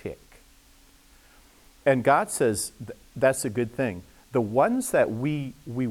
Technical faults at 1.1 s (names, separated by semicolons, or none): none